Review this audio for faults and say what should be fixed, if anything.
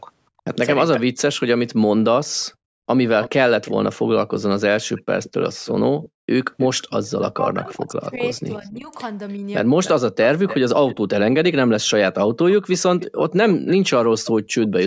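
Echo leak shows up at 3.22–3.71 s, 4.96–7.76 s, 8.38–8.69 s (very faint, about 30 dB down), 9.3–10.96 s and 12.5–14.68 s. It's a delayed copy of the speech about 15 dB down, trailing by 317 ms early on and 296 ms later. That's likely a speakerphone on the far end whose echo canceller isn't fully cancelling what its mic picks up. To prevent it, get that side on a headset, or turn their speaker down and give the canceller a longer tail.

Speech suppressed in double talk runs from 7.19 to 9.42 s, overlapping the echo. The speech gets pushed down in bursts, about a second in total and up to around 20 dB at worst. That's likely the canceller seeing both sides active and clamping everything it couldn't separate. To prevent it, use a canceller with proper double-talk detection, or cut down the echo so it has less to fight.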